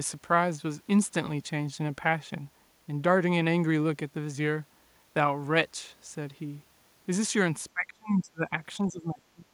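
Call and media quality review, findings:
Echo canceller likely failing to separate near-end talker from loudspeaker echo, turning both down: speech suppressed in double talk, 7.74–8.52 s and 8.83 s to end. Level drops up to about 30 dB, roughly 0.7 s and half a second affected.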